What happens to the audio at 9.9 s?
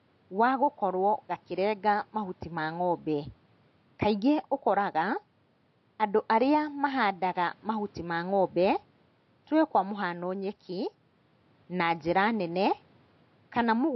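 At 9.9 s the speech carries the AAC compression heard throughout, likely from AAC-LC at a rate near 32 kbps. Coarse quantisation leaves it dull and smeared, with fizzy sibilants. A spectrogram shows a low, hard cut-off and patchy holes across the upper bands.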